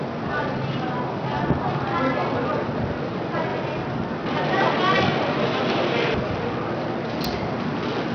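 From the start, the whole clip carries heavy Bluetooth SBC compression damage, most likely from a starved bit pool. The treble flickers in and out and a gritty, aliased grain rides on everything, which fits a low rate of around 64 kbps where the top sub-bands get few or no bits.

At 4.26 s the sound abruptly goes dull and boxy, with nothing left above 4.5 kHz, a level shift of a few dB and a faint new noise floor well below the signal. That's likely the input switching to a poorer device. It happens with no gap at the switch, and the fuller sound comes back at 6.14 s.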